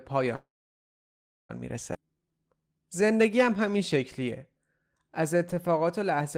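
At 0.35 s the call audio freezes for about 1.14 s, likely because packets stalled in transit and the jitter buffer ran dry. The receiver briefly stretches the last sound, then holds silence for about 1.02 s. Speech resumes at 1.51 s with nothing lost, only delayed.

At 1.93 s comes a skip ahead: roughly 0.7 s of waiting speech is discarded. Playback lurches forward, with only a 13 ms bridge joining the two sides of the cut, so the missing stretch is simply gone.

From 2.01 s to 6.37 s a jitter buffer slow-down follows, as the receiver rebuilds its reserve by repeating single pitch periods and bits of pauses. Speech runs at 90% speed with unchanged pitch, adding 459 ms and making sounds audibly drawn out.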